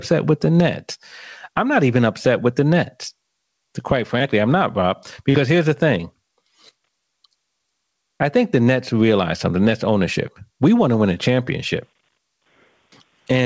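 From start to finish, a fast limiter or compressor is likely pulling the level down hard on every loud syllable of this speech after the microphone gain was set far too high. The gain swings by roughly 15 dB. Loud and quiet passages sit unnaturally close together, giving the speech a flattened, squashed, breathing quality across the whole clip.

At 5.30 to 5.36 s there is a short concealed packet loss. About 40 ms of audio failed to reach the decoder in time, and the receiver covered the gap with roughly 43 ms of synthesised sound, extending the preceding pitch or noise before blending back into the real signal. This is heard as a brief smear or wobble, and any short consonant there may be lost. The call's wideband coding, with nothing above 8 kHz, stays unchanged through it.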